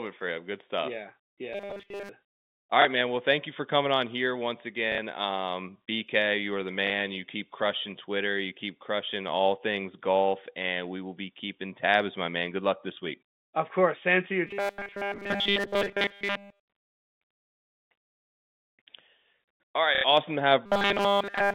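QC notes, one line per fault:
1.53–2.09 s, robotic sound from repeated short buffers. The audio becomes a rigid metallic buzz at 200 Hz. A 5 ms block is likely repeated while new audio is skipped.
14.47–16.68 s, after "to you", robotic sound from repeated short buffers. The same 200 Hz buzz is heard. Almost nothing new gets through.
20.66 s to the end, robotic sound from repeated short buffers. The same 200 Hz metallic buzz runs to the end of the clip.
2.82, 4.92, 6.87 and 19.95 s, packet loss with last packet repeated. Gaps of 30, 60, 30 and 90 ms are filled by replaying earlier audio. The 4.92 s gap follows "coming on here once", and the 6.87 s gap follows "you are the". The longer fills stutter robotically.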